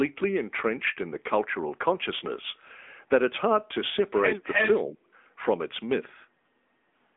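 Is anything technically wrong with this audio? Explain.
Yes. There are three problems.

Throughout, the speech passes through an AMR narrowband mobile codec. The sound is confined to a telephone band of roughly 250 Hz to 3.5 kHz, with nothing above 3.7 kHz. The thin, buzzy, synthetic edge fits a mid bitrate near 10 kbps. Unlike a simple low-pass filter, the harshness here comes from the vocal-tract model, not just from the missing highs.

From 4.45 to 4.75 s there is an echo leak. A copy of the talker returns about 313 ms later, at about the same level as the original speech. It is likely that a loudspeaker echo slipped past the canceller. Reverberation would smear the sound; this is a distinct, delayed repeat.

From 4.87 to 5.09 s the speech is suppressed in double talk. Over roughly 200 ms the voice dips in pieces, sinking by about 35 dB at its deepest. The canceller was likely confused by both sides talking at once. 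Packet loss would leave gaps or concealment buzz, but this sounds like volume being gated down.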